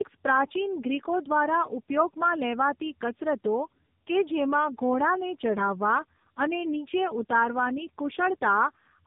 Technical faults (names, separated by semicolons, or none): tandem speech coding